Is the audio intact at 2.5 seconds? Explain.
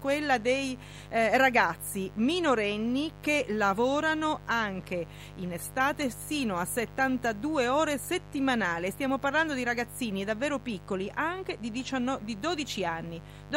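No. At 2.5 seconds, as through the whole clip, a mains buzz sits under the speech. Sharp switching spikes at twice the 50 Hz mains rate add harmonics reaching several kilohertz. The result is a steady, raspy buzz roughly 20 dB below the speech.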